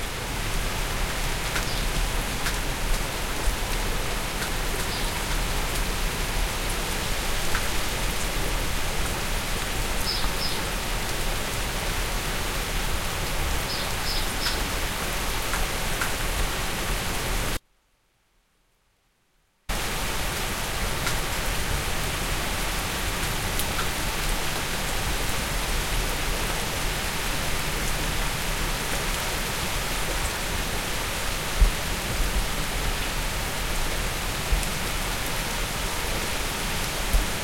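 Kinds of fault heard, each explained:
Audio dropout to a faint residue: from 17.57 s to 19.69 s, about 2.1 s, the sound abruptly collapses to a faint leak roughly 40 dB below its normal level, then snaps back mid-flow. This is likely a brief loss of the signal while the path downstream stayed live. On a waveform the envelope drops to a thin sliver with sharp edges, and on a spectrogram a clear band of near-blank time-frequency cells shows only faint traces of the usual content.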